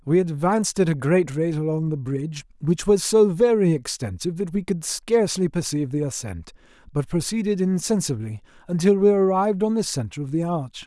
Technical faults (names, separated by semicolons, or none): none